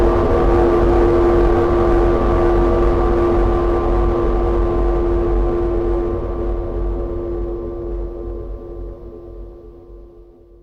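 No faults detected anywhere in this recording of sounds.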